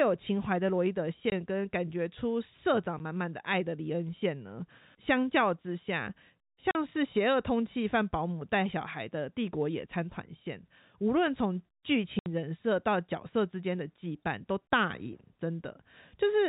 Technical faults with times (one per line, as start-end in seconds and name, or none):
1.30-1.32 packet loss filled with silence
2.99 packet loss filled with silence
6.71-6.75 packet loss filled with silence
12.19-12.26 packet loss filled with silence